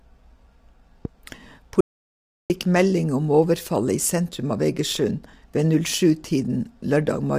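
This is a speech clip with plainly audible low-delay AAC compression throughout. The voice sounds rough and grainy. Noise fills the gaps between the harmonics, and the top band sounds thin and synthetic. The short frames of a low-delay codec such as AAC-ELD resolve pitch poorly, and the damage is consistent with a bitrate around 32 kbps. A loud pop sits on top of the speech from 1.05 to 1.07 s. It is a single sharp click, a few dB louder than the voice, and the speech carries on beneath it. A voltage spike from a switch, a plug or static is the likely source. At 1.81 s there is an audio dropout to silence lasting about 0.69 s. The sound cuts off completely, with no room tone, and returns at 2.50 s on "melding om". The input was probably lost briefly, and silence was written in its place.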